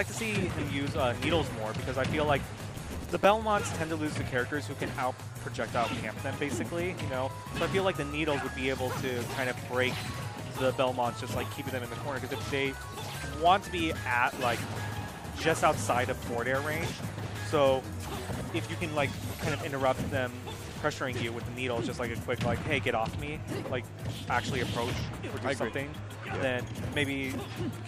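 From 2.69 to 3.25 s there is a burst of processor overload crackle. The processor keeps missing its deadlines for small audio buffers, around 5 ms each, and some thirty of them fail over that stretch. Each miss repeats a scrap of old audio with hard edges. The result is a gritty tearing laid over the sound for just over half a second. A single dropout would leave one clean gap. This is dense, rapid crackle that stops abruptly once the load clears.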